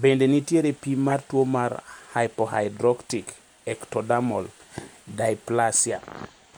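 At 1.09 to 1.12 s, between "nitiere pim" and "tuo mar", a corrupt frame decoded gives a brief, loud chirp. Bit errors in a few compressed frames were decoded anyway, putting energy at wrong frequencies. A much fainter blip follows at 3.05 to 3.08 s.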